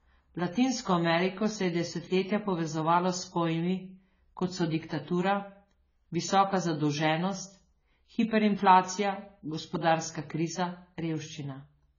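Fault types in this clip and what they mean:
AAC compression: speech sounds dull and smeared, nothing above 7 kHz, warbly fizz on sibilants; heavy damage likely from AAC-LC at a low bitrate around 16 kbps.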